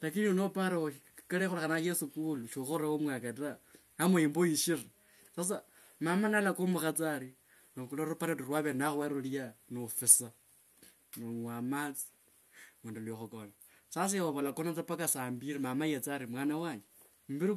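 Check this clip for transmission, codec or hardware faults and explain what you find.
Checking this clip turns up no faults to explain.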